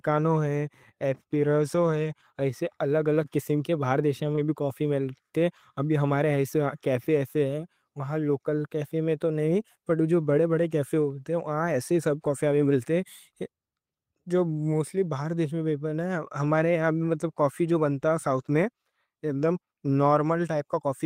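At 3.21 to 3.23 s there's a lost packet rebuilt from error correction. The next packet carried a low-bitrate backup copy, and the decoder played those 20 ms, so there's no gap, just a moment that sounds rougher and a bit noisier. At 4.35 to 4.39 s a short concealed packet loss follows. About 20 ms never arrived in time, so the decoder extended the preceding sound to cover the hole before blending back, which comes across as a quick smear or wobble. Inside that stretch, at 4.37 to 4.39 s, another 20 ms packet was rebuilt from error correction, adding that same grainy texture. The last one lands at 11.01 to 11.03 s, again a single packet rebuilt from its backup copy, brief and slightly rough-sounding.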